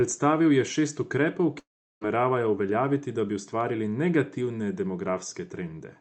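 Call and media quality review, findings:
Long network dropout, 1.59–2.03 s. Likely cause: a run of packets never reached the receiver, roughly 0.42 s of audio lost. Concealment stretches the last sound into a fading buzz, then about 0.37 s of near-silence before speech resumes with the gap missing. Opus call path audible; content above 8 kHz is absent.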